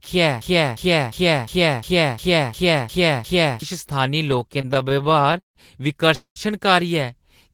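Broken-record loop from 0.41 to 3.62 s: a 0.35 s fragment of the speech repeats exactly, back to back, nine times, so the recording sticks in place for over three seconds. The likely cause is a player, encoder or stream that stalled and kept resending the last chunk it held, and whatever speech belonged in that stretch never arrives. Repeated stalls (stutter) follow from 4.31 to 5.57 s, where the sound catches 22 times. Packets were arriving late or more slowly than playback needed, so the jitter buffer kept running dry and the receiver stretched the last sound across each wait. About 375 ms is filled this way, roughly 30% of the span, with the longest hold at 151 ms. Nothing is lost, but the delivery drags and judders. A call audio freeze at 6.15 to 6.38 s puts a 210 ms hold into the audio. The last sound is carried on and fades out, leaving 110 ms of silence before the speech resumes from exactly where it stopped. 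This points to packets held up in transit that emptied the jitter buffer. Nothing goes missing, but everything after this point plays about 210 ms later.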